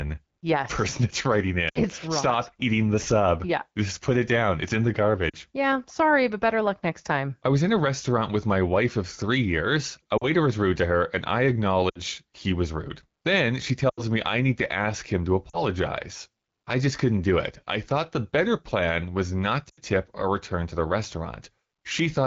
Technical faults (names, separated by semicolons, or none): lost AMR speech frames